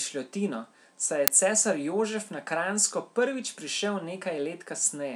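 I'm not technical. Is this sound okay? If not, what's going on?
No. At about 1.28 s there's an uninitialised buffer: for roughly 5 ms the player output leftover memory instead of speech, heard as a sharp burst of loud digital noise. That length fits a 256-sample block. A dropout would leave brief silence; this adds noise instead.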